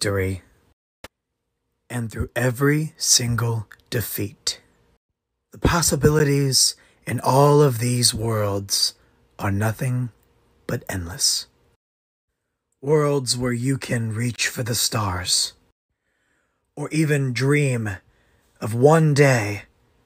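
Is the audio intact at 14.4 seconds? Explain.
No. From 14.36 to 14.38 s there is a block of digital silence lasting 20 ms. The output most likely stopped receiving samples in time, so zeros were written instead. The sound cuts out abruptly and returns with no fade, giving a brief hole.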